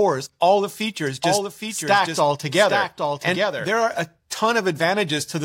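A second copy of the speech is most likely being captured through a slower path or held out of step by an edit, producing a doubled audio track from 1.07 s, right after "all the", until 3.67 s, just before "are a". The copy trails the original by roughly 0.7 s at about 5 dB lower, a full-band, dry repeat with no room colour. It cuts in and drops out abruptly.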